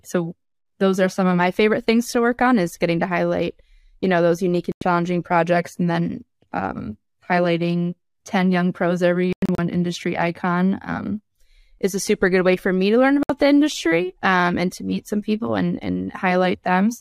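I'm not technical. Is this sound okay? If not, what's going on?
No. The speech has three digital broadcast dropouts, where the sound briefly cuts to silence. At 4.72 s it vanishes for about a tenth of a second. From 9.33 to 9.59 s there are several short holes, the longest about 0.1 s. At 13.23 s it drops out again for under a tenth of a second. Each time, the receiver lost the signal or got damaged data and muted until clean data returned, so whatever was said in those gaps is gone.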